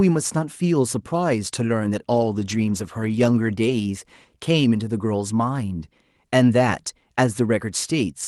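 At 2.1 s the speech goes through a call bitrate drop that lasts until about 4.59 s. The encoder was starved of bits, and the coarseness sounds like the Opus stream falling from about 32 kbps to somewhere near 14 kbps. It sits at its worst for about 1.2 s. You hear the top end dull as the high frequencies get trimmed, with a rough, watery texture, before the fuller 12 kHz band comes back.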